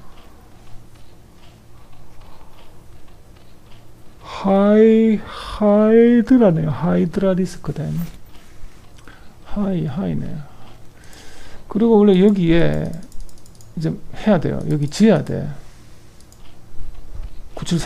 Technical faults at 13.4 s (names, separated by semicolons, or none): none